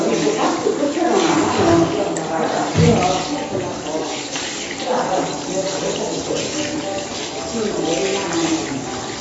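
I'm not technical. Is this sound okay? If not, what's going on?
No. Heavy AAC compression likely discarded detail to save space, so throughout nothing above 7.9 kHz survives, leaving the sound noticeably dull and smeared.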